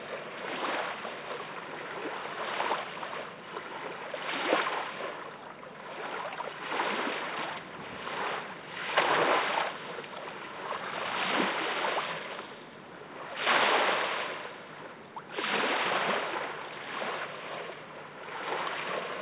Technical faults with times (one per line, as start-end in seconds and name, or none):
none